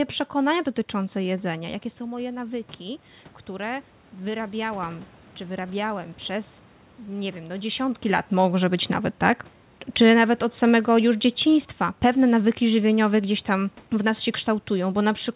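Speech carried over a call path band-limited at 4 kHz, consistent with G.711 A-law at 64 kbps, shows automatic gain falling from 10.01 s to 13.2 s. The gain control reacts to input it judges too loud and eases its gain down by about 3 dB, so level sinks steadily. Unlike the talker shifting position around 1.5 s and 8 s, the room noise drops along with the speech, revealing gain applied to the whole signal.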